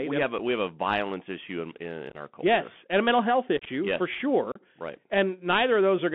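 Throughout, the Bluetooth CVSD headset codec limits the speech to about 150 Hz to 3.4 kHz. Its granular hiss and scratchy, overloaded s sounds distinguish it from a plain low-pass line. Unconcealed Bluetooth headset packet loss punches abrupt silent holes at 0.38 s before "we have a violence", at 2.10–2.15 s, at 3.57–3.68 s between "and a mental health" and "yes for", and at 4.52–4.60 s. The holes are left empty, not smoothed over by concealment.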